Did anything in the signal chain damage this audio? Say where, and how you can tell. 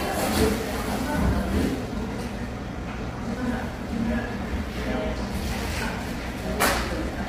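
Yes. The damage is at the codec stage and runs through the whole clip. The sound is rough and grainy, with noise filling the gaps between tones and a dull, synthetic top band. This is likely heavy low-delay AAC compression, consistent with AAC-ELD at about 24 kbps, where short frames smear fine detail.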